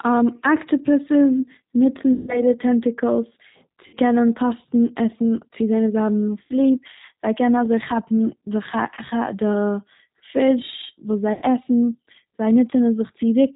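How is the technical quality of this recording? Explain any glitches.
The recording has plainly audible low-bitrate codec damage throughout, plus five short dropouts where lost packets were patched over.

The G.729 codec, at 8 kbit/s, rebuilds this speech from a vocal tract filter, pitch predictor and a few pulses per frame, and passes nothing above 4 kHz. The result is muffled, slightly rough and synthetic-sounding for the whole clip.

VoIP packet loss concealed by the speech codec occurs at 2.13–2.41 s (after "אקטיפאסוס ניצן"), 3.87–3.96 s (before "קענען קאסטן"), 6.44–6.59 s, 8.94–8.99 s (after "קענען אזוי כאפן די") and 11.33–11.45 s. Between 30 and 150 ms of audio went missing each time. The decoder stretched its last pitch and filter with falling gain, so each gap becomes a fading buzzy tone or coloured noise, and the speech stays weak briefly afterwards.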